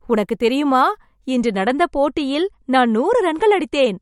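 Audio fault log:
1.3–4.0 s: adaptive stream at a lower bitrate. At 1.3 s the speech suddenly loses its top end, with nothing left above about 11.1 kHz, and stays that way to the end of the clip without any gap or dropout. The player switched to a leaner version of the stream, dropping from roughly 128 kbit/s MP3 quality to something closer to 48 kbit/s. That starves the encoder of bits, so it discards treble and leaves the speech duller and more artefact-prone.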